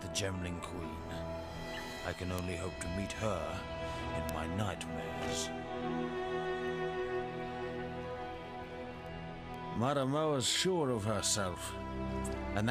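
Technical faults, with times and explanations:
0.48–12.41 s, word clock ticks: sharp ticks of uneven strength repeat at a steady rate of about one every half second, about thirty in all. A digital link is being read by a device running on its own clock, not locked to the sender's. Each time the two clocks slip past each other, a few samples are misread and a single sample is dropped or repeated. The tick rate points to a clock mismatch of roughly 50 parts per million.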